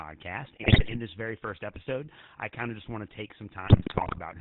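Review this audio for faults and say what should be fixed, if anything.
The speech passed through the GSM full-rate codec, which fits a 13 kbps path. It models the vocal tract, drives it with coarse regular pulses, and cuts everything above 4 kHz. That leaves a plainly audible buzzy, gravelly roughness and a dull, band-limited tone across the whole clip.

GSM bit errors corrupted the decoder's filter, pitch and gain parameters from 0.62 to 0.97 s and again from 3.65 to 4.20 s. Corrupted frames bend the spectrum and jump in level, so the speech breaks into squawks, pops and gargling in both stretches.

To prevent this, route the audio over a wideband codec with a reliable, error-protected link, or conceal corrupted frames instead of decoding them.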